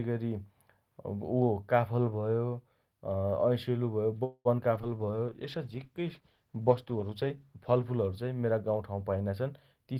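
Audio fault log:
4.23–4.48 s, call audio freeze: the sound stops moving forward for about 0.22 s, the last bit drawn out as a fading buzz or hiss, with about 50 ms of it silent. It then picks up exactly where it left off, so nothing is lost. The likely cause is packets stalling in transit until the jitter buffer ran dry.
4.57–4.61 s and 4.82–4.86 s, short concealed packet loss: each time about 40 ms of audio never arrived, and the receiver covered only 8–9 ms of the hole by extending the preceding sound before rejoining the real stream. You get a quick smear or wobble, and playback jumps ahead, cutting the delay by roughly 30 ms.
4.76–9.16 s, call bitrate drop: the encoder was pushed from 40 kbps down to 15 kbps and sat at the bottom for about 2.8 s. At that rate Opus codes much more coarsely and trims the highs, so the sound goes rough and muffled until the rate climbs back.
4.97–5.67 s, jitter buffer slow-down: the receiver repeated tiny chunks, pitch periods or bits of pause, over and over to rebuild its reserve, adding 69 ms. 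Playback runs at 91% speed with unchanged pitch, so things sound slightly stretched.
9.76–9.98 s, jitter buffer speed-up: with too much audio queued, the receiver snipped out short pitch-period pieces in a row, dropping roughly 70 ms. Playback runs at 124% speed at the same pitch, so this last stretch comes across noticeably hurried.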